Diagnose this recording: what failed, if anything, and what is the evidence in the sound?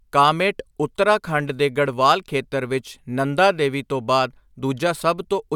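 Listening closely to this speech recording, nothing stood out that would point to a failure at any stage of the chain.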